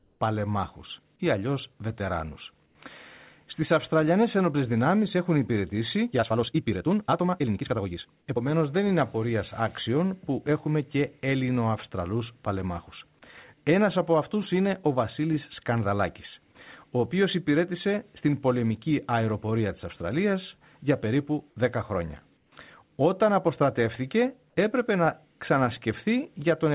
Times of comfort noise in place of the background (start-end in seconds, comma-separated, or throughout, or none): 0.00-0.20, 2.66-2.75, 22.37-22.52